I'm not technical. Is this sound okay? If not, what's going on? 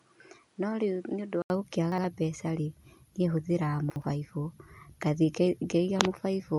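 No. For the first 1.5 seconds the speech sounds duller, a little quieter and slightly hissier, with nothing above 10.5 kHz. At 1.5 s there's a gap of about 80 ms, then it clears up. The likely cause is an input switched to a poorer device, a lesser microphone or headset, before the normal one took over.

There are also chunks out of order at 1.92 to 2.04 s and at 3.9 to 4.02 s, the second just after "niĩ hũthagĩra". Each time, a 60 ms slice of audio plays one slot late, after the slice that should follow it, so the moment sounds briefly jumbled.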